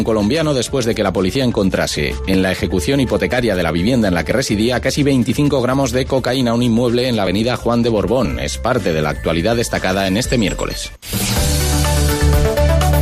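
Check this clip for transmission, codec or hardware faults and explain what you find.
The clip has one transmission fault, an overlap between stream segments, occurring at 1.35, 2.34, 3.32, 4.31, 5.29, 7.27 and 8.25 s. Adjacent one-second segments carried overlapping timestamps, so the player discarded several milliseconds of real audio at each boundary, leaving an abrupt waveform jump heard as a brief click or tiny skip.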